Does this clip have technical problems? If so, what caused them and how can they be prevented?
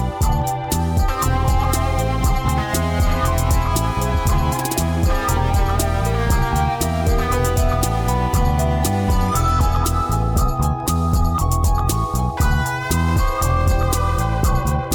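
Yes. Compressed frames are skipped at 2.47 s and 14.62 s. About two frames go missing at the first point and one at the second, so the sound jumps ahead by a few milliseconds and then by about 20 ms. On a spectrogram this shows as a vertical line, and the waveform has a small discontinuity. Checking file integrity before decoding and using error-resilient storage or transport prevents these dropouts.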